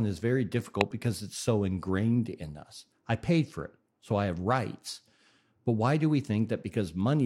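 A harsh, fairly loud burst of garbled noise cuts in from 0.81 to 0.91 s, right after "is very" and before "because it's so ingrained"; a much fainter blip follows at 5.33 to 5.36 s, just after "so I have rights". Both are corrupt frames decoded: flipped bits in the compressed data made the decoder apply wrong gains and codes, placing energy at false frequencies. The first spans several consecutive frames, the second roughly one.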